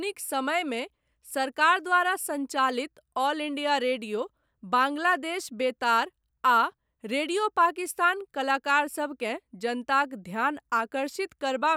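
Nothing technically wrong can be heard in this speech recording at any point, so there are no times or causes to report.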